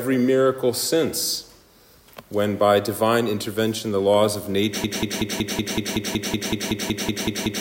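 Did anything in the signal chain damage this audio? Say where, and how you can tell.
Yes. Something downstream, likely a stalled player or stream buffer, stopped getting fresh data at 4.84 s and kept replaying the last fragment it held. From there to the end, a 187 ms piece repeats exactly and back to back, 15 times, giving a rapid, mechanical stutter at about five cycles per second. Because each repeat is identical, this is a broken-record loop rather than natural repetition, and whatever audio belonged after 4.84 s is lost.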